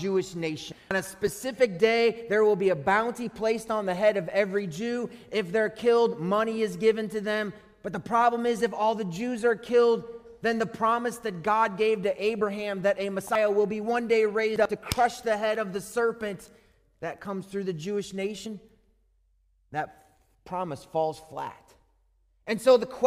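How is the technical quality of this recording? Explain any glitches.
There are four jumps where whole compressed frames are skipped: 0.63 to 0.91 s, 13.26 to 13.35 s, 14.56 to 14.75 s and 18.37 to 18.46 s. Each time the decoder drops frames, and the sound leaps ahead by roughly 0.1 to 0.4 s.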